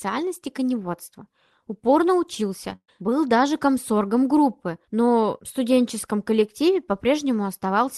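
At 2.70 s, just before "был даже комсоргом группы", there is a short concealed packet loss: about 10 ms of the speech never arrived at the decoder in time, and the receiver patched the gap by extending the preceding sound for roughly that length before crossfading back into the real signal. The result is a very brief smear or wobble rather than an audible hole.

Only a few hundredths of a second later, from 2.75 to 2.89 s and still ahead of the same phrase, a burst of packet loss follows. About 130 ms of speech is missing. The concealment stretches the last sound over about 124 ms and attenuates it as the gap lengthens, so what is heard is a held, fading continuation with about 60 ms of silence in it, and the speech then picks up further on with that stretch gone. The surrounding audio carries the Opus call codec's band limit of about 12 kHz, which fits a bitrate near 24 kbps.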